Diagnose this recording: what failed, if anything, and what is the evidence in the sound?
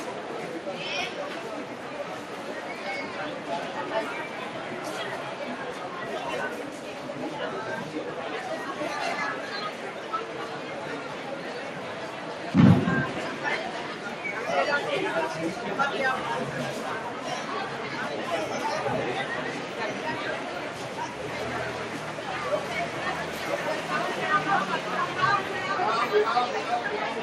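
A noise suppressor applied to music or sounds runs throughout the recording, a failure at the call-processing stage. Sustained and steady parts of the sound sink, while sharp onsets pass largely intact, so the level pumps and the texture thins, with a swing of roughly 5 dB. The suppressor was built for speech: it treats held tones, ambience and decaying reverb as background noise and pulls them down between attacks.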